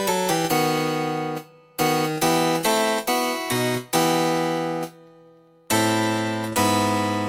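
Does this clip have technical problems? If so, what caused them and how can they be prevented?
Yes. From 0.08 s to 7.18 s there are periodic USB or driver dropouts: every 0.1 s, about seventy times, a tiny slice of audio, around a tenth of a millisecond, is blanked to silence, giving a steady ten-per-second ticking. The strict regularity separates this from random buffer underruns, which land unevenly, and from interference clicks, which would sound even without signal. To prevent it, find and stop the background task that blocks the USB bus or driver, and give the interface its own port.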